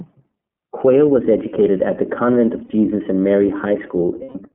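iLBC codec coding runs through the whole speech clip. The line passes only about 150 Hz to 3.4 kHz, so the speech loses its low body and all its sibilant air. The 30 ms framing fits iLBC's 13.33 kbps mode. Each frame's excitation is coded on its own, and that leaves a plainly audible rough, slightly synthetic grain on the speech.

Lost iLBC frames occur at 0.41 to 0.44 s, 2.66 to 2.71 s and 4.22 to 4.36 s. At each gap the decoder fills the hole by repeating the last pitch cycle, mixed with noise. The first two sound like a brief buzzy hold of about one 30 ms frame. The last is about 120 ms long, which points to four consecutive frames, and it stretches into a breathy, fading vowel before the voice returns almost immediately.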